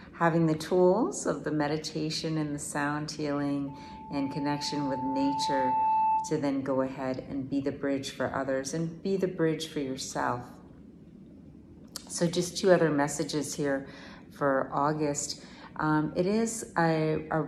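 At 3.67 s a loudspeaker feedback squeal kicks in and hangs around until 6.54 s. The mic is hearing the speaker it's driving, and at 878 Hz the loop gain has crept past one, so that frequency keeps feeding itself. You hear a pure-ish tone swell over roughly two seconds into a howl that ends up a few dB louder than the sound underneath.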